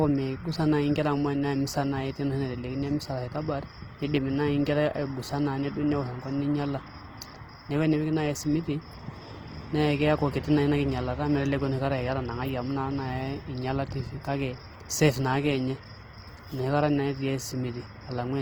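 From start to finish the speech has a grainy, rough texture, with tones turning noisy rather than smearing into swirl. That's likely Opus compression in its music-style CELT mode, squeezed to something like 16 kbps. When the bits run short, the encoder keeps each band's energy but patches in folded or noise-like detail, so nothing drops out and content still reaches about 20.2 kHz. The damage is plainly audible throughout.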